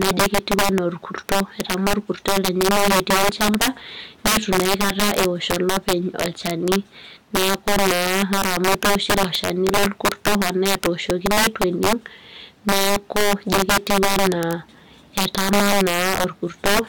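Violent, sharp cracks burst out on the louder syllables throughout the speech, far harsher than ordinary clipping. This is integer overflow: the signal is driven about 19 dB too hot, and the few percent of samples past the integer limit wrap to the opposite sign instead of being held.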